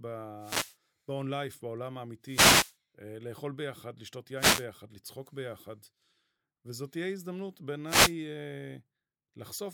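Wireless microphone noise hits at 0.39–0.76, 2.23–2.76, 4.36–4.65 and 7.85–8.15 s: the FM radio link fades, so receiver noise rises as a swish of static over the speech, rather than the sound cutting out like a digital dropout.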